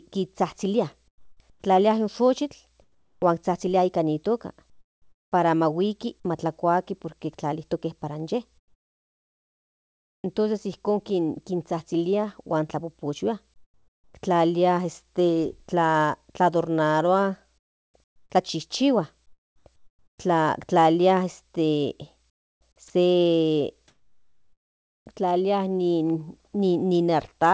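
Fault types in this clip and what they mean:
Comfort noise in place of the background: in six pauses, at 1.08–3.22, 4.70–5.32, 8.58–10.24, 13.54–14.14, 17.58–20.18 and 22.30–25.06 s, the real room tone gives way to a flat, featureless hiss. In the second, third and fourth pauses it is about 10, 18 and 9 dB quieter. The likely cause is discontinuous transmission, with the receiver generating the fill noise. On a spectrogram these stretches show a smooth, uniform texture ending at 8 kHz like the rest of the call audio, and the waveform sits as an even band.
Onset clipped by the voice detector: at 1.60 s the first 20 ms of a speech onset is missing, so the sound starts abruptly with no soft attack. The likely cause is a voice detector that was slow to register that speech had resumed, so synthetic noise filled that moment instead. On the waveform the envelope jumps from the noise floor straight to full level, and the spectrogram shows a hard vertical edge where a gradual build would be.
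Sound dropped by the voice detector: at 22.88 s, inside the last noise-filled pause, 20 ms of real sound is lost and replaced by steady noise. The likely cause is the detector briefly mistaking the sound for background and halting transmission. The waveform shows a short notch where the detail flattens into even, low-level noise, and the spectrogram shows a thin strip of uniform texture interrupting the sound's structure before it returns.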